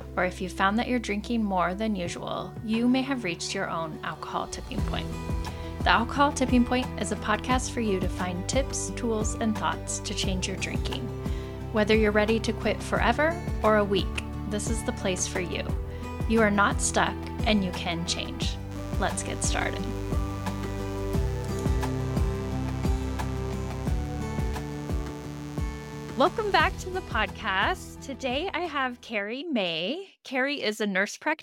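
From 18.71 to 26.71 s, a mains buzz sits under the sound. Sharp switching spikes from a dimmer, rectifier or unshielded line get in twice per 60 Hz cycle. Their harmonics reach several kilohertz. The result is a steady, raspy buzz, roughly 20 dB below the signal.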